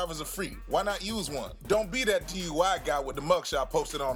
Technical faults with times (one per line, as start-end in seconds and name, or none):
0.32 repeated buffer
1.73 repeated buffer
3.14 repeated buffer